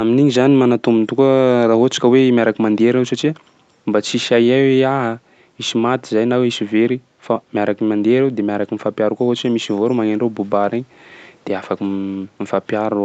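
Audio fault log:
No faults to log for this audio.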